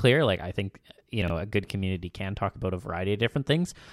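At 1.22 to 1.3 s, between "I think you" and "a good community can", chunks out of order: one 20 ms chunk plays three chunks late, giving a jumbled instant with three hard joins.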